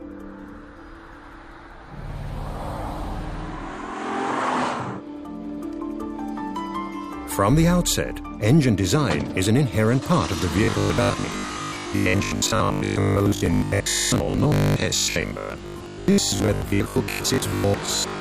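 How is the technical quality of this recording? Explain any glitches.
The recording has one clear glitch: robotic sound from repeated short buffers, running from 10.64 s to 18.20 s. A rigid 50 Hz metallic buzz replaces most of the audio. The likely cause is audio arriving too seldom, with playback looping the last 20 ms block. Unlike a mains hum, the buzz still loosely tracks the underlying sound.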